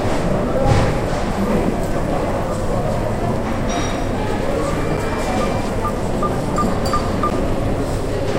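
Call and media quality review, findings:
Sharp tick at 4.97 s and again at 7.30 s: block of digital silence, about 7 ms then 11 ms, hard cut to silence and back. Probably the playback or processing buffer underran; the second gap fits a 512-sample buffer.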